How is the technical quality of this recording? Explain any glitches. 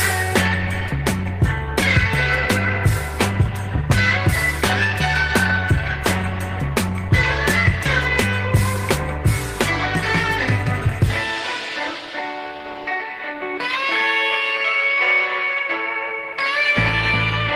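No technical glitches can be heard anywhere in the recording. There are no interruptions, dropouts or disturbances in the sound to explain.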